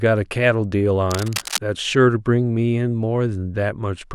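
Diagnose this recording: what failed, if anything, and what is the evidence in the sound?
Cable scratch noise, 1.1 to 1.58 s: dense, uneven rustling roughly 10 dB below speech, likely a worn analogue connector whose contact resistance fluctuated when moved.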